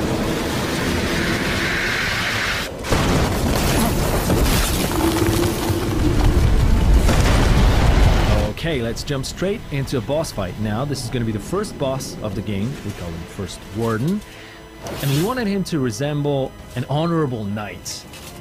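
USB whine runs through the whole clip, a steady fixed-pitch tone at 1 kHz, strongest at its 2 kHz harmonic, sitting roughly 30 dB below the sound. The USB bus's 1 ms frame timing is leaking into the audio through the power or ground.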